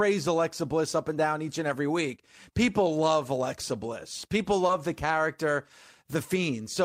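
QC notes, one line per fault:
4.67–4.71 s short concealed packet loss: 20 ms of speech never arrived in time, so the decoder extended the preceding sound and blended back, causing a brief smear.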